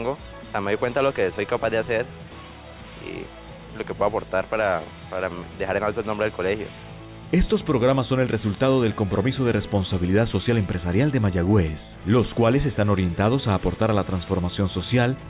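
Nothing stood out as a technical problem on listening.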